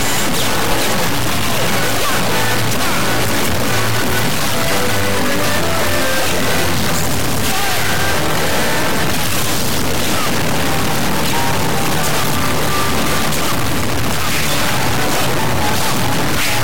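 From start to finish the audio carries a harsh, buzzy distortion, and quiet stretches fill with a gritty noise floor rather than falling silent. The likely cause is a stuck bit: one data bit held fixed, so about half of all samples are pushed off by a large step of roughly -10 dBFS, which is a high bit. On a spectrogram, broadband hash covers the whole clip, and the waveform shows abrupt jumps between two offset levels.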